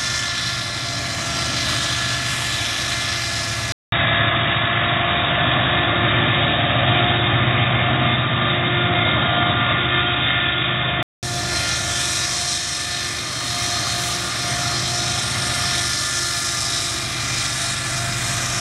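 From 3.72 to 11.23 s, the input likely switched to a poorer device: after a 200 ms gap, sound turns boxy with nothing above 3.8 kHz, shifts level, and gains faint background noise.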